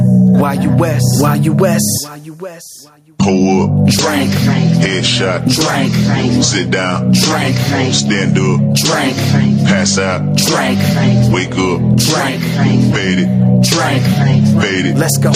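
The whole clip pumps. The gain swings by roughly 10 dB, so you get that breathing effect all the way through. Loud and soft passages land closer in level and everything feels squashed. That's classic gain pumping, most likely from the input gain being set way too hot and a fast limiter or compressor clamping down on each peak.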